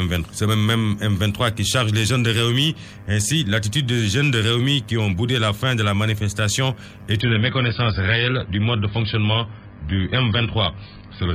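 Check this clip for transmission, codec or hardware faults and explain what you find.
One fault is present. From 7.21 s to the end, the adaptive stream drops to a lower bitrate. The player switched mid-stream to a much leaner encoding of the same AAC audio, most likely because the connection slowed. The sound reads as a step from a comfortable rate down to something near 16 kbit/s. Everything above 5.1 kHz vanishes at once, leaving the audio dull and muffled with a watery, smeared texture. The change is abrupt, with no gap or dropout.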